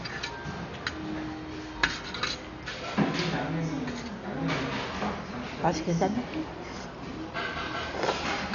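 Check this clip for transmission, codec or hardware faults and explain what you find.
One codec fault runs through the whole clip, and it is most likely heavy Dolby Digital compression. From start to finish nothing is present above 6.9 kHz, so the sound is dull and boxed-in. Around tonal parts there is a rough, fluttering noise. This fits an AC-3-style encoder starved of bits, consistent with a bitrate near 48 kbps. It narrows the band and leaves many frequency lines without mantissa data, and the decoder fills those gaps with dither noise. That grainy noise fill separates it from a plain low-pass filter, which would sound dull but clean, and from MP3-style damage, which tends toward watery, chirping artefacts.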